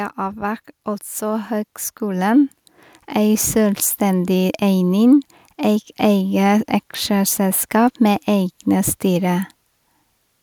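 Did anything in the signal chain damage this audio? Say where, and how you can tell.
Yes. The call processing stage applied automatic gain rising from 0.15 s to 2.61 s. The speech and the background swell together by about 7 dB over those two and a half seconds. The gain control judged the input too quiet and raised it gradually.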